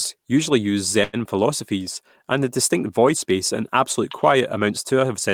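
A short stall from a late packet hits this speech clip at 1.03 to 1.16 s, between "usually use" and "philosophies and the distinct": the jitter buffer ran dry, so about 97 ms of stretched sound holds the last syllable until the packet arrives. Nothing is lost, but everything after it is 97 ms late.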